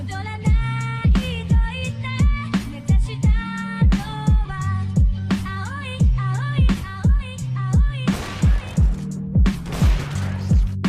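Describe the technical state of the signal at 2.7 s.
At 2.7 s the signal is intact, with no dropout, distortion, or other technical fault to be heard at that moment.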